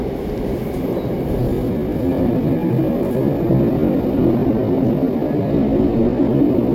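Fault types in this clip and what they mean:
Time-stretched section: from 1.35 s to the end, the audio was likely stretched by software to fill a longer duration, running at about 0.6 times its original speed while holding pitch by repeating short slices of the waveform. The pace drops abruptly at 1.35 s, yet the pitch stays where it was. Everything after that point drags and sounds drawn out.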